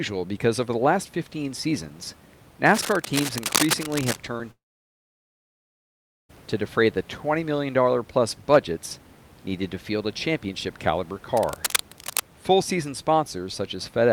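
Speech recording, with room noise sitting about 26 dB below the voice. From 2.71 to 4.21 s a dense, uneven scratching and rustling runs over the speech, nearly as loud as the voice itself, and it returns from 11.37 to 12.20 s, just after "field a championship caliber". This is cable scratch noise, likely from a worn cable, connector or control being handled: as it moves, its contact resistance jumps about rapidly, injecting ragged bursts of noise straight into the signal. Between 4.37 and 4.41 s there is a brief smear in the sound, a quick wobble rather than a clear gap. That is short concealed packet loss: about 20 ms of audio never reached the decoder in time, and the receiver covered the hole by extending the last sound for roughly 17 ms before blending back into the real signal. At 4.51 s the audio breaks down more seriously. A short tail of continued sound fades away, and then there is silence for about 1.7 s. 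Speech resumes at 6.31 s on "to defray the", with whatever came in between simply gone. This is a long network dropout, likely caused by a stall in the network path: about 1.8 s of audio never arrived, the receiver briefly stretched the last sound before giving up, and the stream picked up again further along without the lost section.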